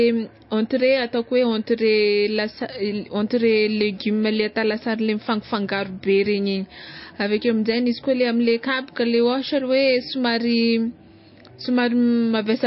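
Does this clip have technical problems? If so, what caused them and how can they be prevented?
Yes. Throughout the speech, nothing is heard above 5.5 kHz. The sound is watery and swirly. This likely comes from heavy MP3 compression, which fits a bitrate near 27 kbps. To prevent it, encode at a much higher bitrate.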